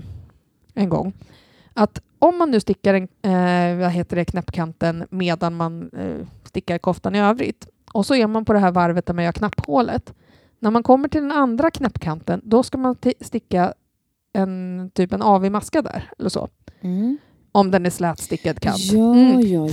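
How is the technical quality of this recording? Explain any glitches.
The speech has three loud pops. At 9.53 to 9.66 s, a double pop rises well above the speech. At 11.85 to 11.87 s, a single pop is louder still. Each is likely a sudden voltage pulse from a plug, switch or static. The speech carries on underneath.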